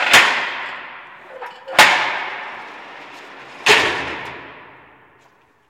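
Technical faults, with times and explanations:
No technical faults can be heard; the signal plays without interruption or damage anywhere in the clip.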